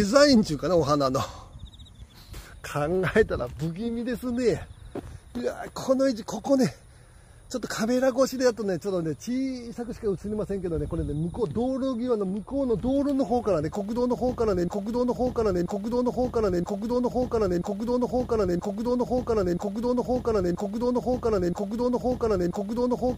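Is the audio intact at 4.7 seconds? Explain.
Yes, the audio is intact at 4.7 seconds, with no dropout, click, distortion or other technical fault audible at that moment.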